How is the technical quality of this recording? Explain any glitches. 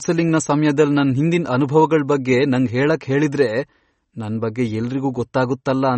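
Technical quality is noticeably compromised by lossy encoding across the whole clip. MP3 compression is the likely cause, present throughout. The encoder appears starved of bits, consistent with a low rate around 32 kbps, so it discards everything above 8.3 kHz and drops weak spectral detail frame by frame. The speech sounds dull and plainly watery, with swirling, metallic edges on sibilants.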